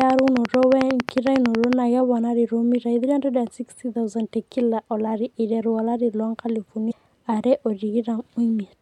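Interference from nearby equipment or a faulty connection likely injects a train of clicks from 0.01 to 1.74 s: about twenty evenly spaced ticks, 11.1 per second, roughly 20 dB above the speech. At 6.89 to 6.92 s, damaged data in the compressed stream makes the decoder lose sync and hunt for the next frame, producing a brief blip.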